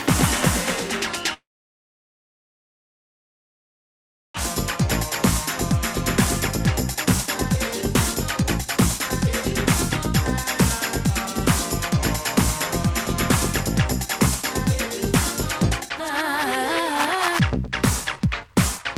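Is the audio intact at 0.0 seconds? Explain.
Yes, the audio is intact at 0.0 seconds, with no fault present at that moment.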